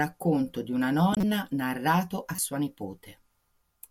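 At 1.13 to 1.23 s, between "di una" and "narrato a", a corrupt frame decoded produces a loud glitch across a few frames. At 2.35 to 2.40 s, after "narrato a", a shorter, quieter glitch follows. Damaged bits sent energy to wrong frequencies, unlike a dropout's silence.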